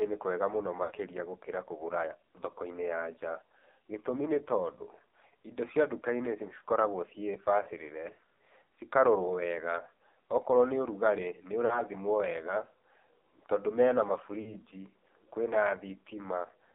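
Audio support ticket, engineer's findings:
AMR narrowband mobile codec, whole clip: speech squeezed through AMR-NB at a low mode, heavy codec damage. Pulse-excited vocal tract model has too few bits per 20 ms frame to shape the voice. Result: buzzy, synthetic timbre, thin band from about 250 Hz up to 3.7 kHz, nothing above. Degree of roughness fits a bitrate near 5.9 kbps. Likely component: narrowband mobile leg of the call path.

Lost AMR speech frames, four dropouts: 0.84 to 0.92 s (about 60 ms), 7.62 to 7.68 s, 11.66 to 11.83 s, 14.42 to 14.55 s. Radio errors corrupt frames, so the decoder fails the checksum and repeats the last good pitch and spectral settings at falling gain. Heard as brief smeared, warbling dips, with the voice returning weak or rough. Gap lengths point to runs of two or three frames. Component: radio link or AMR decoder concealment.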